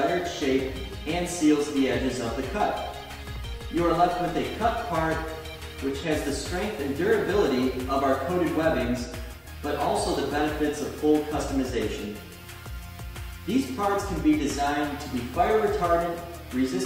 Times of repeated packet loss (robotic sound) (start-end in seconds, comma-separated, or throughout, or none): none